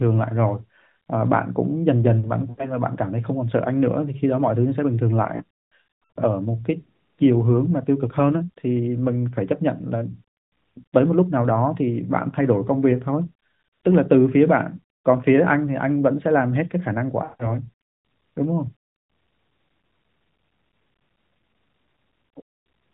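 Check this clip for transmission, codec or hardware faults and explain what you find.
Lost AMR speech frames occur in three places. At 2.50 to 2.74 s, 80 ms drops out. From 5.36 to 6.19 s, losses scatter over 0.8 s, and the longest run is 100 ms. At 17.24 to 17.55 s, 160 ms goes missing. Corrupted frames are discarded, so the decoder reuses its last good pitch and vocal tract settings with falling gain. The speech smears, fades and returns rough. The narrowband mobile codec itself passes nothing above 4 kHz.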